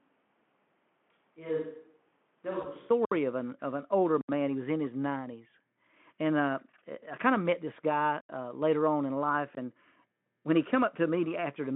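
From the start until 2.90 s the speech sounds roomy and hollow, thin in the bass, about 10 dB quieter than what follows, and carries room noise roughly 35 dB below the speech. It returns to a close, fuller sound suddenly just before "of an of an". The likely cause is a switch to a distant microphone: the close microphone's signal was missing, so a microphone further from the talker was used.

At 2.61 to 2.67 s, inside that stretch, the sound briefly becomes a synthetic, decaying fill. This is VoIP packet loss concealed by the speech codec, and the 20 ms gap fits a single lost frame. The decoder filled the hole by extending its last pitch and filter while lowering the gain. The same thing happens at 7.73 to 7.78 s, between "I kind of met" and "guy uh later on".

At 3.05 to 3.12 s the audio cuts out abruptly and returns just as abruptly. This is a block of digital silence lasting 64 ms. A second one runs from 4.21 to 4.29 s (77 ms), right after "an of an older". 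A third runs from 8.21 to 8.29 s (85 ms), a length that fits a 4096-sample buffer at 48 kHz. In each case zeros replaced the audio, with no fade in or out.

All of this passes through the narrowband Speex line, limited to about 150 Hz to 3.4 kHz.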